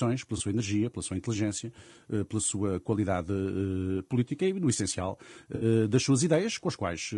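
Low-delay AAC compression, likely AAC-ELD at a rate that fits about 32 kbps, runs through the whole speech clip. Its short transform frames cannot separate the pitch harmonics finely, and at that bit budget the coder leaves noise between them and rebuilds the top band coarsely. The result is plainly audible: the speech sounds rough and grainy, with a hissy, slightly synthetic upper register.

At 0.37 to 0.41 s, AAC frame loss with concealment occurs: roughly 20 ms of audio, which fits a single lost frame, was filled in by the decoder from the preceding spectrum. It comes through as a brief smeared, noisy blip. A longer loss follows at 5.55 to 5.65 s, about 60 ms, consistent with three consecutive frames. The repeated spectrum produces a phasey, washed-out patch before normal decoding resumes.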